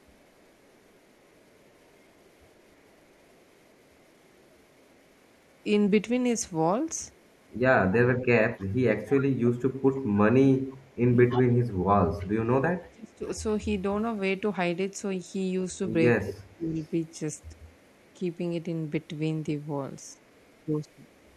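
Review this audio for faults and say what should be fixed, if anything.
Echo leak at 0–5.63, 7.12–12.26, 13.35–13.40, 15.32–18.14 and 20.03 s to the end. A faint copy trails by 303 ms, about 20 dB down at 7.12 s, about 35–40 dB elsewhere. A loudspeaker echo canceller likely let it through.

Speech suppressed in double talk at 9.42–13.26 s, dropping by about 30 dB for roughly 2 s, and at 16.20–16.77 s, by about 25 dB. The canceller likely ducked the talker during overlap.

Tune the far-end echo canceller, or use a headset there.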